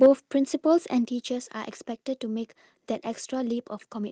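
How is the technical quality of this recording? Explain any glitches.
The quality is degraded by two faults in the speech.

From 0.02 to 0.08 s there is microphone overload. The peaks exceed the limit by about 3 dB, clipping roughly a tenth of the samples. The sound is harsh and crackling. The likely cause is an input volume set too high.

The microphone volume is stepped down twice, at 0.06 s by about 4 dB and at 1.05 s by about 5 dB. Voice and background drop abruptly. This is likely the call software lowering the input after detecting overload.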